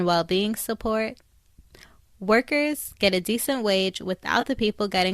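Speech clip with two brief moments of AAC frame loss with concealment. At 2.84 s, just before "get a decent wage", there's a tiny smeared, noisy blip, which fits a single lost 10 ms frame that the decoder papered over by reusing the last good spectrum. A second, a bit longer patch runs from 4.41 to 4.44 s, right after "get a decent wage", sounding about 20 ms long, so roughly two frames. The short frames point to a low-delay AAC stream, likely AAC-ELD.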